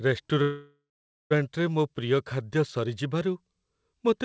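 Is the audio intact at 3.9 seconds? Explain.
Yes, the audio at 3.9 s is intact, carried through the WebRTC call path without any fault, with the band-limited sound of a call codec that leaves nothing above 8 kHz.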